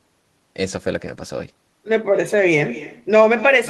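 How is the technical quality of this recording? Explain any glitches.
The recording is marred by one fault that runs through the whole clip: echo with no canceller. Every stretch of speech is followed, after roughly a fifth of a second, by a quieter copy about 16 dB down. The far end is playing the call through a loudspeaker, its microphone captures that playback, and nothing subtracts it, so the sound returns after the network round trip. Unlike room reverberation, which smears into a smooth tail, this is a distinct, thinner repeat arriving at a fixed delay.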